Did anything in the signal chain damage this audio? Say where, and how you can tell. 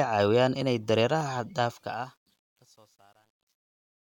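Yes. The fade-out shows truncation distortion on a fade, from a gain or sample-format stage that drops bits without dither. The speech starts fading out at about 1.6 s. From 1.62 s the decay turns grainy instead of smooth. From 2.17 s to the end it is at its worst, sounding gritty. The step size fits roughly a 10-bit word. Quiet samples snap to a few coarse levels and become square steps.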